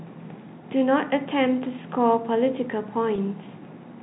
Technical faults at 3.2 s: packet loss with pitch repetition

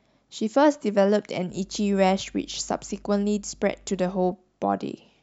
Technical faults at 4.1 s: mains hum

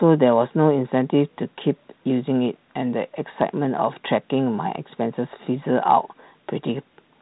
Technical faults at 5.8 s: none

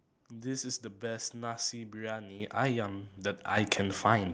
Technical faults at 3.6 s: microphone volume stepped up

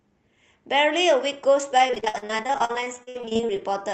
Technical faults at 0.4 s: none

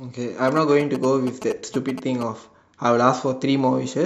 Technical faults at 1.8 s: GSM signalling bursts

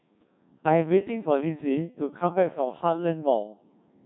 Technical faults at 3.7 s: Codec 2 vocoder

